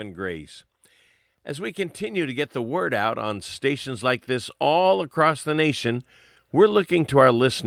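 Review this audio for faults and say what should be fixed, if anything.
Automatic gain rising begins at 1.56 s and continues to the end of the clip. The speech and the background noise swell together, slowly and steadily, over several seconds. The gain control judged the input too quiet and kept raising its gain. Because it boosts everything it receives, the room noise climbs along with the voice. To prevent this, set a fixed input gain at a healthy level and disable automatic gain control during recording.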